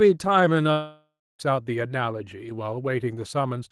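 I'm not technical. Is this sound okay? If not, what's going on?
No. From about 0.71 s to 1.41 s the speech breaks up: the last sound stretches into a fading buzz, goes quiet, then returns with roughly 0.7 s simply gone. That's likely a long network dropout on the call line.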